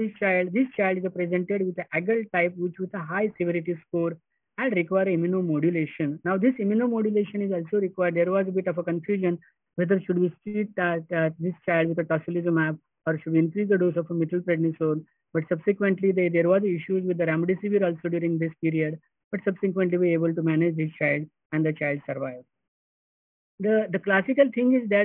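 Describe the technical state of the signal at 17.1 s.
At 17.1 s, as throughout, the sample rate was cut without an anti-alias filter, fitting a drop to 6 kHz. This is aliasing: content above 3 kHz folds back as gritty, metallic false tones about 25 dB below the signal.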